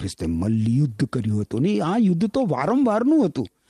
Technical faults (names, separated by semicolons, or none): none